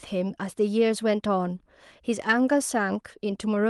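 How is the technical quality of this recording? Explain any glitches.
Nothing stood out on listening to this speech recording, which has the sound of an ordinary call connection, so there are no glitches to explain.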